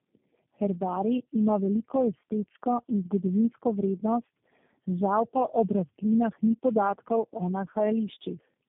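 Throughout, the call went through tandem speech coding: what sounds like four low-rate speech coders in a row, pointing to alternating AMR-NB and G.729A stages, each re-encoding the previous one's decoded output. The speech comes out rough, muffled and warbly, with nothing above 3.7 kHz.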